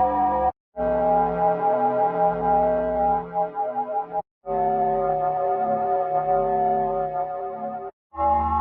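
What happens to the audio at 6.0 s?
A noise suppressor built for speech was left running across the whole clip, so at 6.0 s it still treats steady tones, ambience and decaying tails as noise. Onsets slip through while sustained parts sink by around 10 dB, leaving the sound pumping and thinned.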